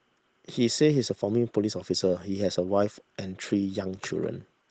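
Nothing here stands out as a fault, just the speech coming through as you'd expect.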